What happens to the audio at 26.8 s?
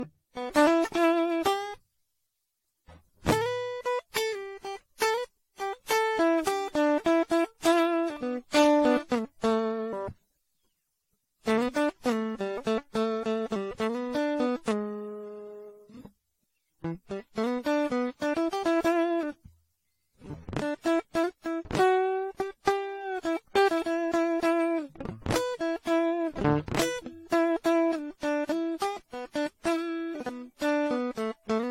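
At 26.8 s the music carries the same generation loss heard throughout: swirly, hollow, smeared attacks, nothing above 16.6 kHz, likely from about ten passes through a 64 kbit/s AAC-LC encoder.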